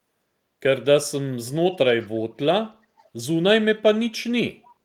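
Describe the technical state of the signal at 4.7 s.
Around 4.7 s, from 4.63 to 4.68 s, there is a brief echo leak: a very faint scrap of the speech returns 331 ms after the original, far below the direct speech. This is likely a far-end loudspeaker whose echo canceller let a bit of its microphone pickup through and sent it back. Unlike room reverberation, which trails off smoothly from the source, this is a distinct delayed copy, detached from the original by a third of a second.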